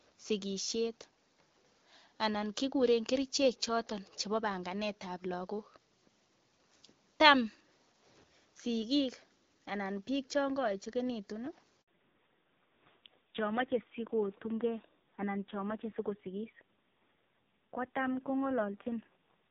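At 11.82 s the speech drops out in a handover gap: the call switches networks and no frames arrive for 60 ms, until 11.88 s. Unlike packet-loss concealment, nothing is smeared or repeated. The sound simply fades fast into a short, clean silence.

From 11.88 s to the end, a fallback to narrowband takes over. Nothing remains above 4 kHz, and the speech turns duller and rougher. The earlier light HD Voice sound suggests about 12.65 kbit/s AMR-WB, and the later sound fits AMR-NB near 5.9 kbit/s. The added rasp and the exact handover timing set it apart from a plain low-pass filter.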